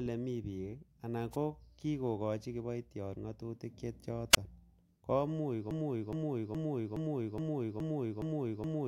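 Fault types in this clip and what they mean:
Wireless microphone noise hit: a brief burst of static at 1.32 to 1.36 s, about 45 ms long, where the analogue FM link fades from multipath cancellation and receiver noise rises over the speech before the carrier recovers.
Wireless microphone squelch dropout: at 4.32 to 4.37 s the radio signal fades far enough for the receiver's squelch to close, giving a quick rise of hiss, a hole of near silence about 24 ms long, then the speech returning.
Broken-record loop: from 5.71 s to the end, a 0.42 s fragment repeats exactly, back to back, eight times. This likely comes from a stalled player, encoder or stream resending its last buffered piece, and the speech that belonged there is lost.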